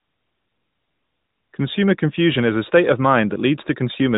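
No technical faults can be heard in this speech; its narrow, telephone-like tone comes from an AMR narrowband mobile codec path that passes nothing above 4 kHz and leaves only a light trace of its own coding, at a rate that fits the 12.2 kbps mode.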